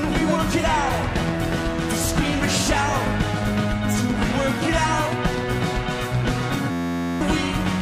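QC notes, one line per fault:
6.71–7.21 s, system hang loop: the playback system stalled while the audio hardware kept replaying the same small ring buffer, so one 11.61 ms slice of sound repeats exactly 43 times. A segment that short recycled at 86.1 Hz fuses into a steady buzz at that rate instead of distinct stutters. The loop length fits a 512-sample buffer, and about half a second of the real audio is lost under the repetition.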